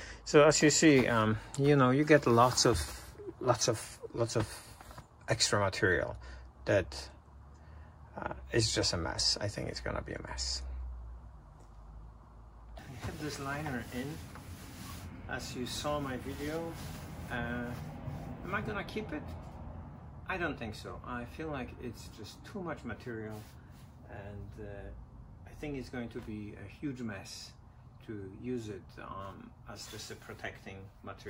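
No technical faults occur anywhere in the audio, so there is nothing to describe in time order.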